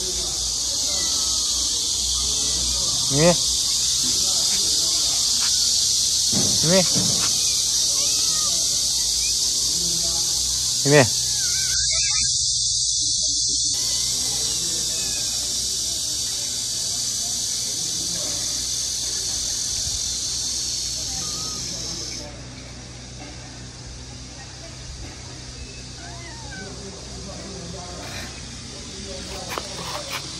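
From 11.74 s to 13.74 s the stream drops to a lower bitrate for two seconds. Everything above 10 kHz vanishes at once and smeared, swirly codec artefacts rise, a shift that points to something like a 24 kbit/s MP3 standing in for a 128 kbit/s one while the connection slowed. Unlike a dropout or packet loss, the sound never breaks or stutters; quality switches abruptly down and then back up, with no gap at either edge.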